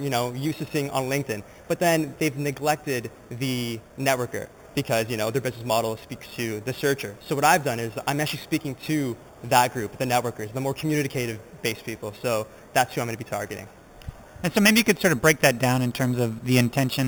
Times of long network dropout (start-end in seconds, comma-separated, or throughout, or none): none